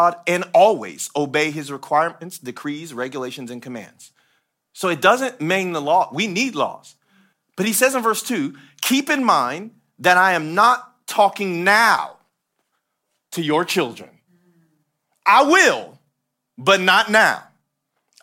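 No technical faults are audible anywhere in the speech.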